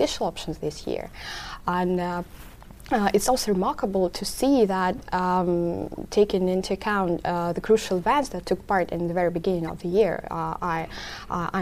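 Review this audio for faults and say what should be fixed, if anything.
Corrupt frame decoded: short bursts at 5.96 s, 8.24 to 8.26 s and 9.67 to 9.69 s, where damaged compressed data was played instead of being concealed. Misread gains and codes push energy into the wrong frequencies, giving a brief chirp or blip peaking around -40, -20 and -25 dBFS, the middle one loudest. Each lasts about one or two frames. On a spectrogram each appears as a thin vertical smear of misplaced energy. To prevent this, check frame integrity with CRC or checksum validation and route failed frames to packet-loss concealment rather than the decoder.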